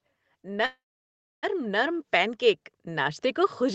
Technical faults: automatic gain rising; call audio freeze

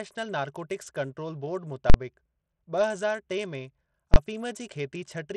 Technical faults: Bluetooth SBC compression; invalid numbers at full scale

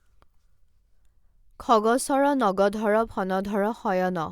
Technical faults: none

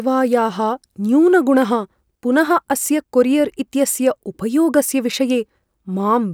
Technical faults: none

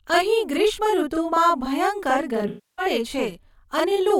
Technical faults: channel delay (doubling); AAC frame loss with concealment

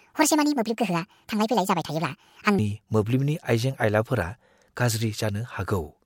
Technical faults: section at the wrong speed

